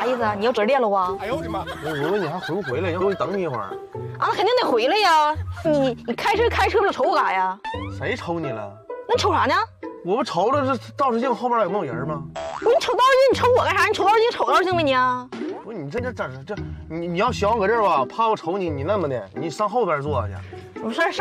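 You'll hear five quick blips at 0.56, 3.00, 5.64, 15.98 and 20.99 seconds, each only a couple of hundredths of a second long. That's damaged data in a compressed stream: at those spots the bytes got mangled, so the decoder misreads the frames, loses sync and hunts for the next valid header. What comes out is a short chirp or squawk before the audio carries on.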